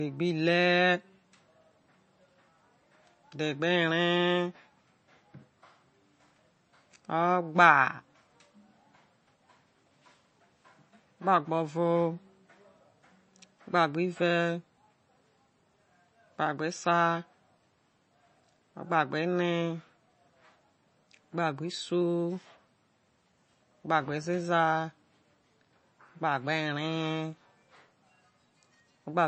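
The speech is band-limited throughout, with nothing above about 8.3 kHz. Its s sounds take on a watery, swirling texture with metallic chirps, and consonant onsets smear. That points to likely MP3 compression at a low rate, near 30 kbps. Short of bits, the encoder cuts the treble at a fixed frequency and drops weak frequency lines frame by frame. The flickering, warbling residue is what separates this from a simple low-pass filter or low sample rate, which would dull the sound without the swirl.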